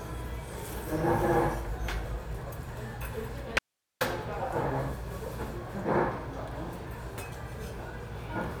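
At 3.59 s the sound drops out abruptly, and for about 420 ms, until 4.01 s, there's only faint hiss, roughly 50 dB down. That's an audio dropout to a faint residue, likely the signal feed breaking while the path downstream stayed live.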